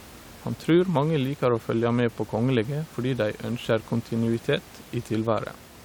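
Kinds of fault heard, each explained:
No faults heard in this speech; the steady room tone sits about 22 dB below the talker and belongs to the recording space.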